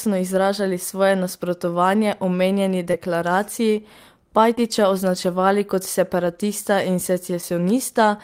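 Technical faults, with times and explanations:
2.91 s (after "svoje nasprotovanje omenjeni"), 4.55 s (before "označevali kot separatista") and 7.41 s, short concealed packet loss: about 20 ms of speech each time arrived too late, and the decoder extended the preceding sound to fill it. This leaves a brief smear or wobble rather than the clean silent gap of a dropout.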